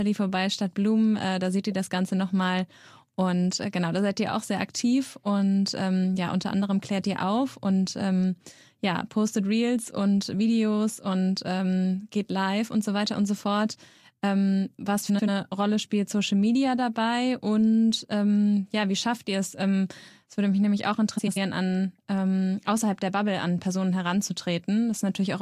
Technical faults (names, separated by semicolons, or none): frames out of order